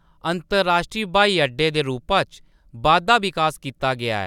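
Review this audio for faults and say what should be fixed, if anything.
Nothing to fix: no faults heard anywhere in the speech.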